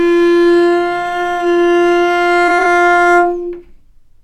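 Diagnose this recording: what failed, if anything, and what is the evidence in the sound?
Codec stage, AAC frame loss with concealment. From 2.48 to 2.65 s, short smeared, noisy patches are scattered across about 170 ms, with the longest gap around 20 ms. This fits roughly three lost frames that the decoder refilled from the last good spectrum. On a spectrogram these show as blurred, noise-filled vertical strips.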